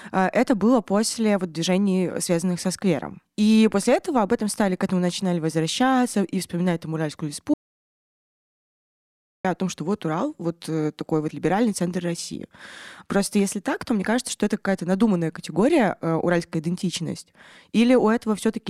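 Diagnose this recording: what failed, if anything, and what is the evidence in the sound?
Audio dropout to silence from 7.54 s to 9.45 s: the speech stops abruptly and returns at "о том что вот", leaving about 1.9 s of silence with no room tone, breath or noise floor underneath. Because even the background vanishes, the loss sits upstream of the recorder rather than in the acoustic scene, most likely a momentary break in the input device or its link, while the recording stage kept writing silence and the speech in that span is lost.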